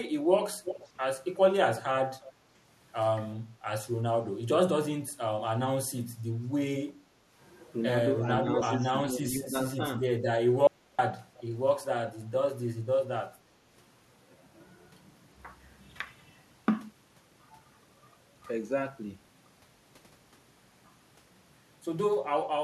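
Speech with echo leak at 0.64–0.89, 1.77–1.82, 2.23–2.30, 6.88–6.92 and 11.36–11.44 s: a copy of the voice returns after a consistent 350 to 366 ms, which marks it as echo rather than room reverberation. It is strong at first and fainter later, likely from a far-end loudspeaker getting past its echo canceller. Speech suppressed in double talk makes the voice dip by a few decibels at 8.43–8.48 s and by about 15 dB across 8.85–9.68 s, likely because an echo canceller turned down overlapping talk. An audio dropout to silence at 10.67–10.99 s erases about 0.31 s completely, leaving no room tone, which sets it apart from suppression, and probably comes from a lost input link.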